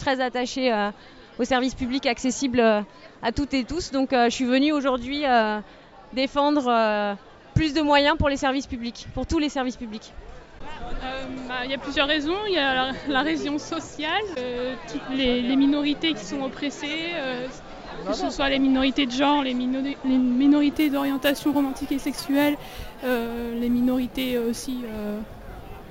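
At 20.73 s the sound picks up imaging from sample-and-hold upsampling and keeps it to the end. Each sample was simply repeated to get from 16 kHz to 44.1 kHz, with no smoothing filter, so mirrored copies of the spectrum leak through. The first copy fills 8 kHz to 16 kHz, sitting about 21 dB under the signal. You hear it as a bright metallic fizz riding on top, tracking the loudness, with its lowest band moving against the pitch.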